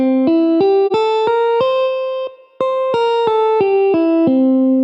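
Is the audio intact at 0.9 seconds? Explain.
No. AAC frame loss with muting hits from 0.86 to 0.92 s: the decoder received no data for that stretch and zeroed its spectrum, which fits one lost frame of about 43 ms. The overlapping windows fade the sound out and back in, leaving a brief dip.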